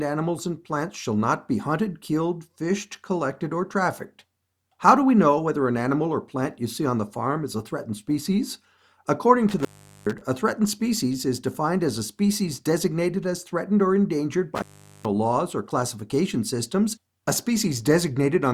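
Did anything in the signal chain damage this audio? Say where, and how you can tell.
Yes, in the analogue wiring. The audio drops out twice, from 9.49 to 10.21 s and from 14.55 to 15.05 s, each gap breaking off with crackle at its edges and leaving faint hiss underneath. The line sits open for about 0.42 s the first time and 0.43 s the second. That points to an intermittent contact, a loose cable or plug that briefly loses connection and scrapes as it breaks and remakes.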